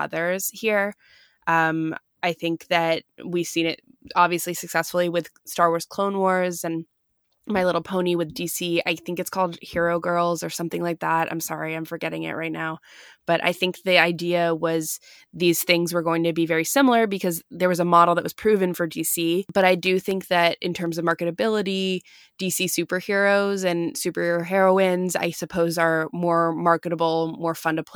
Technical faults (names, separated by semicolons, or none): periodic USB or driver dropouts